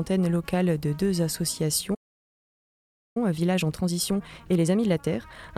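The player most likely ran short of data, or its thread was held up, at 1.94 s, and that playback stall leaves the output silent until 3.17 s. The sound cuts off mid-flow and nothing is heard for about 1.21 s, a gap long enough to register clearly as a break rather than a pause. When output returns, the sound resumes, though the gap alone does not show whether it picks up from the exact point of interruption.

To work off the backlog built up during that gap, the player then applies time-compressed catch-up from 3.17 s to the end of the clip, trimming small segments out of the stream and cross-fading across the joins. The result runs at 1.25 times normal speed while keeping its original pitch, so the final stretch sounds hurried and pressed together rather than raised in tone, continuing that way through to the end.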